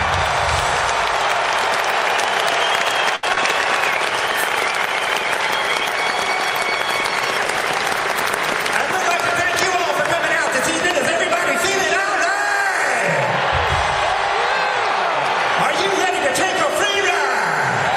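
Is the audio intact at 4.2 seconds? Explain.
No. At 4.2 s you're inside a call bitrate drop that runs from about 3.91 to 9.07 s. The bandwidth estimate fell, so the encoder went from 64 to 28 kbps and coded everything more coarsely, leaving the sound rough and muffled until it recovers.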